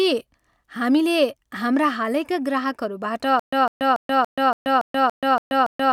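A stall in playback, likely the stream running dry and retrying, produces a stutter with silent gaps in this speech clip from 3.39 s, right after "हाम्रा हालैका ग्राहकहरूबाट", to the end. A 154 ms fragment repeats nine times, separated by about 130 ms of digital silence, every 284 ms, and the speech that should follow is lost.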